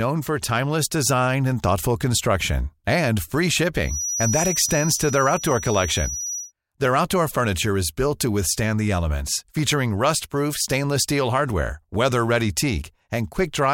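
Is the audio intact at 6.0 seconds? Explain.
No. At 6.0 seconds the speech carries a feedback whistle, which runs from 3.81 to 6.53 seconds, starting just after "thoughtful construction and free". A thin, steady tone near 5.8 kHz sits roughly 10 dB under the speech and swells and fades slowly in level. The likely cause is a loudspeaker-to-microphone loop held right at the edge of feedback, so that single frequency keeps ringing without building into a runaway howl.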